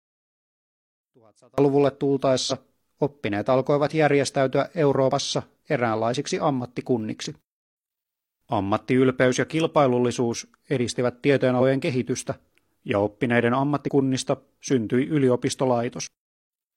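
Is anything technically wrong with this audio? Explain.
Yes. From 0 to 1.58 s, one channel inverted is the likely cause: reversed polarity cancels the shared centre when summed, dropping the speech by about 33 dB to a faint residue.

Damaged data in a compressed stream makes the decoder lose sync and search for the next frame header, producing brief glitches at 2.47 s (just before "oppineet alkoivat järjestäytyä"), 5.07 s (right after it), 11.57 s, 13.84 s (after "kehitystä ja oppineiden") and 16.07 s.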